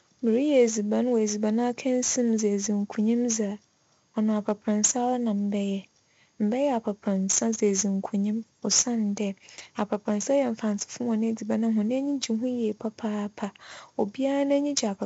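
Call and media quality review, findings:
4-bit ADPCM compression, throughout the speech: heavy gritty hiss riding on every loud syllable, rough distortion on sharp onsets where the adaptive step lags. Nothing above 7.7 kHz, dull top end. 64 kbps stream, which fits 16 kHz sampling at 4 bits per sample.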